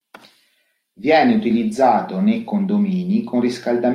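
No technical faults can be heard anywhere in this recording. The speech signal runs on without any break or disturbance.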